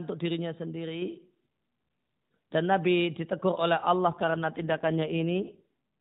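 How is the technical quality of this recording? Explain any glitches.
The recording is narrowband mobile speech with nothing above 4 kHz. The sound fits AMR-NB at about 12.2 kbps, with light codec roughness. One glitch stands out. From 4.10 to 5.63 s there is an AMR rate drop. The speech turns rougher, buzzier and more synthetic, with no gap and no change in bandwidth. This fits the codec being switched down to around 5.9 kbps, with fewer bits left to model the voice, before the rate recovers.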